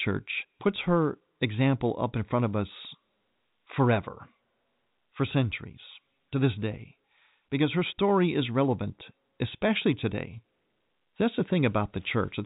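No technical faults occur in this speech recording, so there are none to describe in time order.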